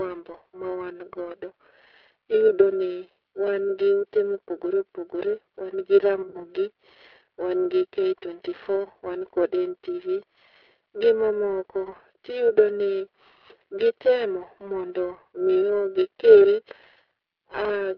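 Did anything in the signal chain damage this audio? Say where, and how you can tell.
Yes, at three stages. The codec is G.729, running at 8 kbit/s throughout. The line is confined to roughly 200 Hz to 3.5 kHz, and the speech carries the slightly rough, synthetic texture of a model-based coder that rebuilds each 10 ms frame from a vocal-tract filter, a pitch predictor and a few pulses. Plain band-limiting would sound dull but clean. The rough, synthetic resynthesis is what marks this as a low-rate speech codec.

Periodic clock jitter at the converter adds a steady rough, metallic edge to the speech that disappears in the pauses. A clock wobbling at around 1 kHz puts sidebands roughly that far above and below every component, and the brighter consonants and upper harmonics come out harsher than the low fundamentals. Broadband noise or hum would stay audible in silence. This roughness follows the signal and vanishes with it, which is what identifies it as jitter.

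VoIP packet loss concealed by the speech codec shows up on the network side at 2.48 s, 6.22 to 6.47 s, 8.84 to 8.88 s and 12.49 to 12.53 s. At each point the decoder fills the gap by extending its last pitch and filter with falling gain. The 6.22 s event is longest, with scattered losses over about 120 ms and a run of about 50 ms. The others are brief, one or two frames' worth. A digital dropout would leave a hard gap, whereas these spots are filled with a synthetic sustain and a weak, distorted recovery.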